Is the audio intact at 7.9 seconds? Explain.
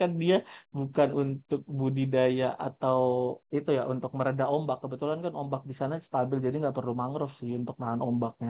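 Yes, the speech at 7.9 seconds is intact, with only the narrow sub-4 kHz band of ordinary A-law telephone coding to be heard there.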